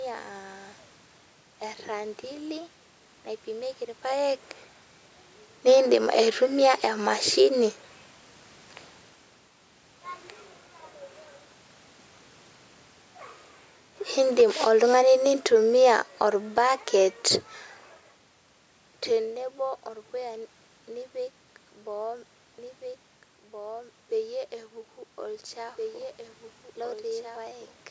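From 14.24 to 17.29 s, automatic gain falling pulls the level down about 5 dB; unlike a talker moving away, the room background sinks along with the speech.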